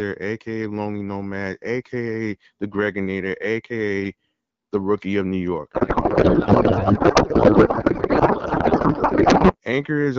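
A codec payload misread runs from 5.73 s to 9.56 s. The speech gives way to garbled noise and warble that barely tracks it. The receiving side is unpacking the AMR-WB bits with the fields in the wrong positions, which points to octet-aligned frames being read as bandwidth-efficient ones, so each frame decodes as valid but meaningless parameters. Before 5.73 s the wideband codec sounds clear, consistent with a 12.65 kbit/s rate.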